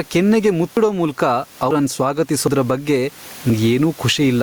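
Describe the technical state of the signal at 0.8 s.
Right around 0.77 s the speech jumps ahead, most likely a dropped buffer (overrun): roughly a tenth of a second was overwritten before it was read, and the two sides are butted together. You'll also hear gain pumping through this stretch, with loud and soft parts pulled closer in level and the sound squashed, a swing of around 15 dB.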